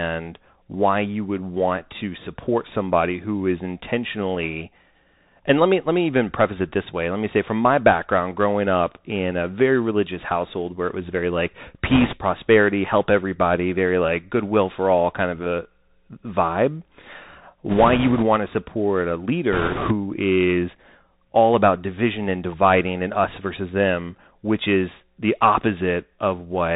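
Bluetooth CVSD headset codec, throughout the speech: the sound is carried as a single up-or-down bit per sample, which fits CVSD's 64 kbps stream, with an adapting step size. Everything above 4 kHz is gone, giving a muffled, boxed-in tone. Sibilants come out scratchy where the step cannot keep pace, and a fine granular hiss sits under the voice the whole way through.

Bit errors on a Bluetooth voice link, 11.90 to 12.18 s, 17.69 to 18.24 s and 19.53 to 19.94 s: flipped bits corrupt the CVSD stream just after "it was very like", just before "to support a", and between "to support a" and "is all about division". Because each bit carries little weight, the result is a rushing, crackly noise rather than loud clicks. The rates are about 4%, 3% and 7%, so the last burst is the roughest.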